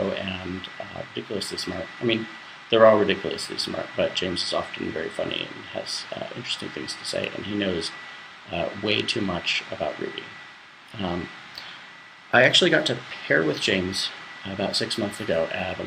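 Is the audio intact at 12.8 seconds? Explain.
Yes, at 12.8 seconds the audio is intact, with no dropout, click, distortion or other fault at that moment.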